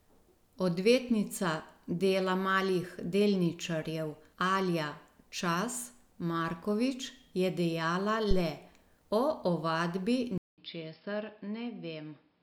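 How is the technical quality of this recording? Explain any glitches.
The recording has two glitches, both in the last few seconds of this speech clip.

At 8.31 to 8.46 s, just after "je dejala", there is a phantom power thump. A supply was switched on or off on the live input and its voltage step passed through the coupling capacitors, producing a deep thump that dies away within about 33 ms.

From 10.38 s to the end, after a 200 ms silence, the sound turns dull and boxy, with nothing above 5.3 kHz, a level about 5 dB lower, and a new noise floor roughly 40 dB below the speech. The likely cause is an input switch to a poorer device.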